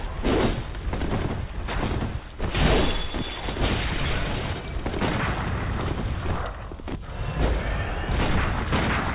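No faults can be heard anywhere in the audio.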